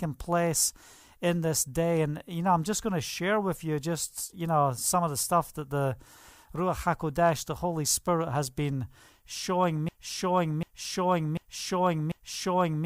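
Right after "has been showing", at about 9.89 s, a broken-record loop kicks in: a 0.74 s fragment repeats exactly four times to the end, likely a stalled player or stream.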